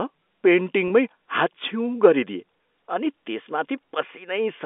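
At 0.88 to 0.90 s, a 20 ms gap consistent with a single lost packet was bridged by pitch repetition, which briefly holds the sound as a slightly buzzy sustained tone.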